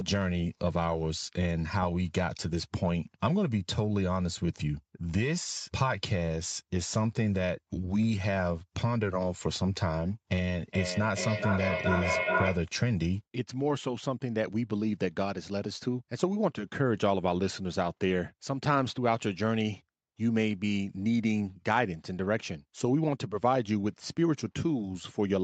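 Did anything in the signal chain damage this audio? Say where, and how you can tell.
Yes. From 10.57 to 12.75 s there is feedback echo between two devices: the speech returns roughly every 0.4 s, thinner and more ringing each pass, peaking at about -1 dB relative to the original. A second device replays this microphone's signal and the loop re-captures it. Room reverb smears continuously, while this echo comes back at a steady interval.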